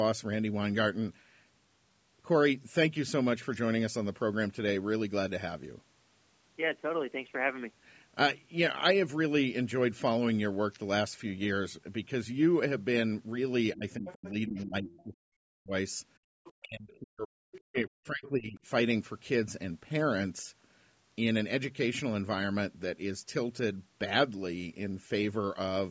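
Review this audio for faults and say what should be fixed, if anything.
Speech suppressed in double talk at 13.74–15.73, 16.62–17.49 and 17.69–18.59 s: the talker's speech dips by up to roughly 40 dB and breaks up. This is likely the echo canceller ducking both voices when it could not separate them. Prevention: use an echo canceller with proper full-duplex double-talk detection instead of hard suppression.

Other side's voice leaking through at 14.06–14.31, 14.91–15.03, 16.44–16.53 and 17.52–17.75 s: brief scraps of a second voice surface between about 15 and 30 dB below the speech. This is likely loudspeaker echo that the canceller did not fully remove. Prevention: improve echo-path modelling and residual-echo suppression, or have the talker use a headset.

Background gated by the echo canceller at 16.18–16.34 s: the room sound drops by about 39 dB for roughly 150 ms while the loudspeaker plays, then returns. 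Prevention: use gentler suppression with comfort-noise fill so the background stays continuous.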